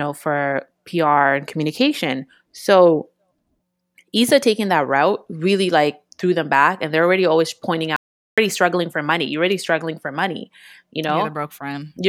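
At 7.96 s the speech just stops dead and comes back at 8.38 s, so there's a hole of about 0.41 s. That's an audio dropout to silence: the gap is silent, with no room tone at all, which tells you the input itself went away while the recording kept running. The likely cause is a momentary disconnect or mute upstream. Whatever was said in that stretch is simply gone.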